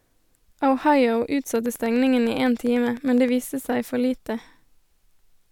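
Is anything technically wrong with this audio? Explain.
Yes. From 1.56 to 3.29 s there is a train of clicks. About twenty pulses arrive at a regular 9.8 per second. This is likely interference or a faulty connection injecting repeated pulses. They tick sharply over the speech, peaking a few decibels above it.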